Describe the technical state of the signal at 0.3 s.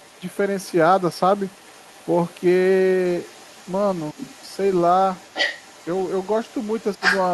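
The other side's voice is leaking through at 0.3 s, from 0.0 to 2.41 s. A second voice sits faintly behind the speech, roughly 30 dB down. Likely an echo canceller left loudspeaker sound in the microphone.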